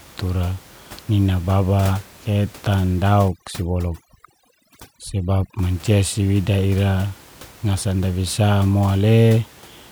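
From 3.28 to 5.59 s, after "tura nina baba ketan", overdone noise removal strips quiet spectral bands, leaving twinkling specks, seen as scattered isolated blobs on the spectrogram.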